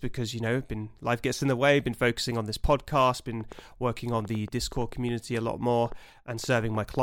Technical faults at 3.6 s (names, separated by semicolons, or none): train of clicks